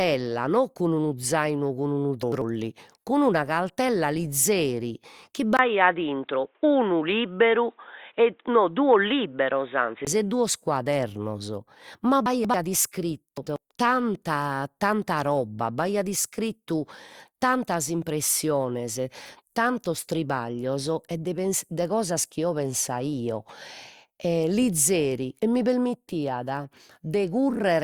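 At 2.23 to 2.42 s the speech jumbles briefly. These are chunks out of order. A block of about 93 ms plays after the block that should follow it. Nothing is missing, but the sequence is wrong, and each misplaced join makes a hard edge.

At 5.57 s, just after "cund'una caltella lizeri chi", there is a 20 ms gap before "e duos". Then the sound turns dull and boxy. Nothing above 3.8 kHz remains. A faint new noise floor sits well under the speech, and the level stays about the same. This is likely an input switched to a poorer device, with a narrower band and its own noise. At 10.07 s the full band returns.

At 12.26 to 12.54 s the same chunks-out-of-order fault recurs. This time the late block appears to be displaced by two positions, so the jumble lasts longer. At 13.38 to 13.56 s a single 93 ms block is again swapped.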